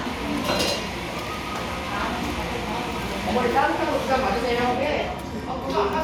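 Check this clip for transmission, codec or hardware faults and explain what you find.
No transmission, codec or hardware faults.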